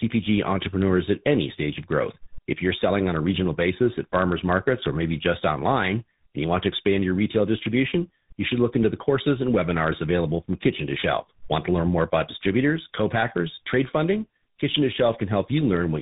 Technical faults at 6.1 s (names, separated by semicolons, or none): tandem speech coding